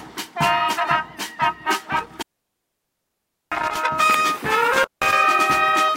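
An intermittent contact, a loose cable or plug that briefly loses its connection, breaks the signal path twice. Between 1.97 and 3.77 s the line opens for a total of about 1.29 s. The sound cuts out, with crackle where the contact breaks and remakes, and hiss fills the gaps. Between 4.73 and 5.13 s it opens again for about 175 ms, a shorter dropout with the same crackling edges.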